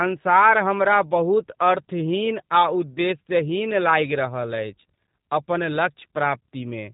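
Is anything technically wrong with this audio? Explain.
Yes. Throughout the speech there is plainly audible G.729 codec damage. The codec rebuilds each 10 ms frame from a vocal-tract filter, a pitch predictor and a few pulses, which fits an 8 kbit/s stream. Unlike simple band-limiting, it adds a rough, synthetic texture, not just dullness, and nothing survives above 3.8 kHz.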